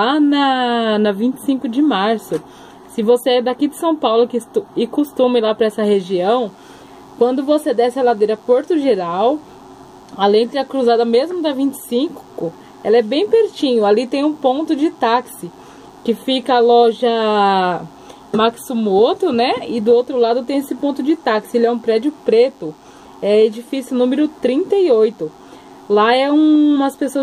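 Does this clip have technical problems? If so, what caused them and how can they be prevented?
Yes. From 5.87 s right through to the end there's a DECT cordless phone buzz, a thin, steady 100 Hz tone with lots of harmonics, sitting well under the sound at roughly 40 dB down. A DECT handset or base station nearby fires a radio burst every 10 ms, and something in the audio chain rectifies it into that buzz. To prevent it, keep DECT phones and bases a few metres from mics, cables and interfaces.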